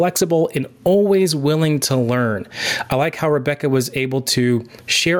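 Right from the start and all the way through, there's gain pumping: the level ducks hard under each loud syllable, a swing of around 20 dB. Likely the input gain was set far too high and a fast limiter keeps clamping down, so the speech sounds squashed.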